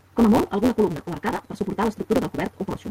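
From start to finish the speech carries a block size mismatch (truncated): a buzz at 172 Hz, which fits a 256-sample read, while the tail of each longer written block is discarded. Speech therefore runs about 1.88 times fast with its timbre intact.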